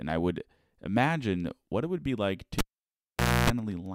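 A live cable is pulled and plugged in after "it would be like" at 2.59 s. A pop, 0.87 s of near silence and 0.29 s of 60 Hz buzz follow, then a pop as sound returns at 3.5 s.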